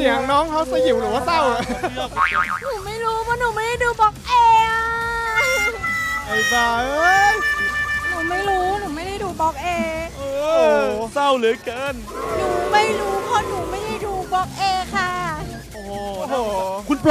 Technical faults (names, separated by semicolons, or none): none